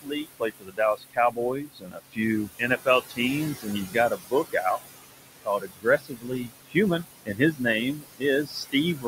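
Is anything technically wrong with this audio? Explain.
Yes. Throughout, noise suppressor artifacts: the suppressor pulls down bands it judges to be steady noise by about 18 dB frame by frame, so the room noise, sitting only about 10 dB under the speech, dips between phrases and surges back under them.

There's also speech cut by the noise suppressor in four stretches: 0.02–3.19 s, 3.55–4.79 s, 5.45–7.61 s and 7.94–9.06 s. Within these, the suppressor mistakes quieter bits of speech for noise and drops them by about 16 to 22 dB, so softer sounds come across swallowed or faint, adding up to roughly three seconds.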